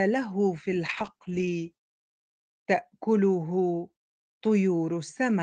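At 0.9 s a call bitrate drop sets in and lasts until about 2.77 s. The call's bandwidth estimate fell, so the Opus encoder had to spend far fewer bits. The sound turns coarse and watery, and the top end dulls as the audio band narrows from 12 kHz to 8 kHz. The degradation fits a fall from around 40 kbps to 10 kbps, held at its lowest for about 1.8 s. Clarity then returns.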